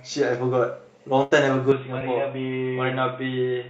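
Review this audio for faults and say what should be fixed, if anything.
Burst of packet loss, 1.23 to 1.33 s: the receiver extends the last sound for about 75 ms and fades it, producing a held, dimming tail, and then resumes with about 80 ms of the original audio skipped. A larger jitter buffer and forward error correction or redundancy would prevent this.

Input switched to a poorer device, from 1.72 s to the end: with no gap at the switch, the sound abruptly turns duller and boxier, with nothing above 3.8 kHz, drops in level by about 5 dB, and gains a noise floor roughly 30 dB below the signal. A change to a narrowband headset or call-profile microphone is the likely cause. Locking the input device for the whole session would prevent this.

Short concealed packet loss, 1.99 to 2.02 s: about 15 ms of synthesized continuation covers a hole where roughly 20 ms of audio never arrived in time, leaving a brief smear before the real signal blends back in. 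A steadier network path or a slightly deeper jitter buffer would prevent this.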